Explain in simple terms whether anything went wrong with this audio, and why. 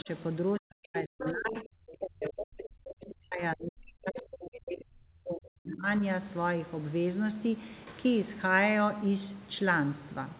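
The talker's speech is pushed down twice: a brief dip at 0.03–0.09 s, then a long stretch from 0.6 to 5.87 s where it sinks deep. This is speech suppressed in double talk, likely because the call's echo canceller heard both sides at once and turned both down.

During that same stretch, scraps of the other side's voice leaking through appear at 0.98–1.03 s, 1.2–1.33 s, 1.54–1.64 s, 2.21–2.31 s, 3.09–3.14 s and 4.16–4.22 s. These short fragments likely come from the loudspeaker playing the other side into the microphone, which the echo canceller failed to fully remove.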